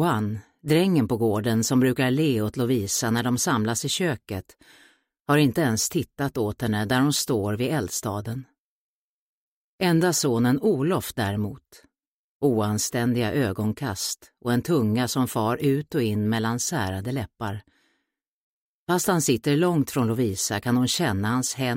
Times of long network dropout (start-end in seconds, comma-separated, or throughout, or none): none